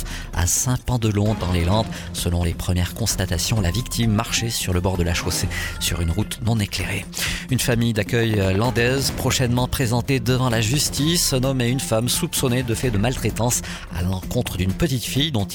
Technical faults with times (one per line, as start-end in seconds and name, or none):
8.23-9.32 train of clicks